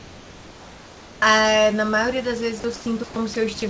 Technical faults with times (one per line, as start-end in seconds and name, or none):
0.00-1.22 comfort noise in place of the background
1.19-1.22 onset clipped by the voice detector
2.60-2.64 sound dropped by the voice detector
2.76-3.16 comfort noise in place of the background
3.34-3.62 sound dropped by the voice detector